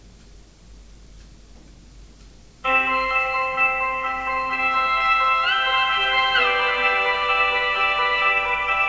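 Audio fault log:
The audio fault log has no entries for this sound, which came over a WebRTC call path with the G.722 codec and so carries nothing above 8 kHz.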